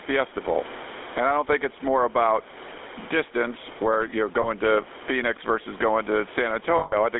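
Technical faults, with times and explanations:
Throughout, gain pumping: loud and soft parts squashed closer together in level, with the gain swinging by about 15 dB, likely from a fast limiter clamping gain set far too high.
Throughout, GSM full-rate codec: buzzy, gravelly speech confined to roughly 300 Hz–3.6 kHz, consistent with 13 kbit/s GSM modelling the voice from sparse pulse excitation.
4.42–4.47 and 6.78–6.94, lost GSM frames: a brief metallic ring just after "about distance where you're", then a longer metallic ring as missing frames are replaced by repeats of the last good one.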